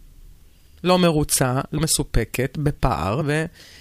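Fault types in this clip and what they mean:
Compressed frames skipped: At 1.77 s and again at 3.2 s the speech lurches forward, losing roughly a tenth of a second the first time and a little less the second, with a short smeared blip at each join rather than a sharp click. A few whole 26.1 ms frames were never decoded, either missing or rejected as corrupt, so playback resumes several frames later, and the overlap between neighbouring frames blurs the seam.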